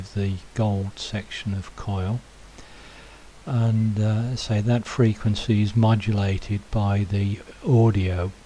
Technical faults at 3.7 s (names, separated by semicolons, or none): none